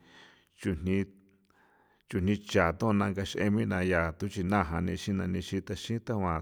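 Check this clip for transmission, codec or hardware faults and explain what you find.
No faults found.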